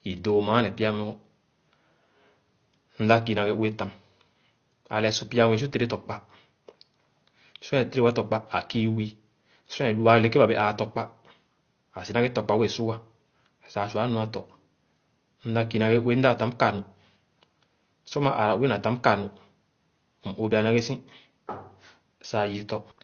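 Dull, band-limited speech runs through the whole clip, with nothing above 6.6 kHz and a layered smearing where two different kinds of codec artefact sit on top of each other. This is likely transcoding between lossy codecs, consistent with Opus followed by low-bitrate AAC-LC.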